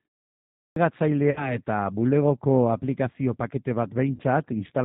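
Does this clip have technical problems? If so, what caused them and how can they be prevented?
Yes, three separate problems can be heard.

The G.729 codec shapes the whole clip. This low-rate VoIP codec, which here sounds consistent with 8 kbit/s operation, models the voice as a vocal tract filter driven by a pitch predictor and a few excitation pulses per frame, and it transmits nothing above 4 kHz. The result is dull, band-limited speech with a plainly audible rough, synthetic grain throughout. To prevent it, negotiate a wideband codec such as Opus or G.722 when bandwidth allows.

A clipped start after a pause occurs at the opening. The clip begins with 0.4 s of silence, during which the output device evidently went idle. It then needed time to wake and resynchronise, so the first sound from 0.4 to 0.76 s is swallowed. About 0.36 s is lost, and the speech enters abruptly, missing its beginning. 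To prevent it, keep the audio device active through silences, for example by disabling its power-saving idle mode.

VoIP packet loss concealed by the speech codec happens twice. At 1.31 s, about 50 ms of packets went missing, which points to five 10 ms frames. The decoder filled the gap by extrapolating its last pitch and filter settings at falling gain. Because each frame depends on the previous one, the voice stays weak or distorted until about 1.57 s. At 4.15 s, roughly 40 ms dropped out, giving a shorter fading patch until 4.21 s. To prevent it, use a larger jitter buffer, forward error correction, or a more reliable network path.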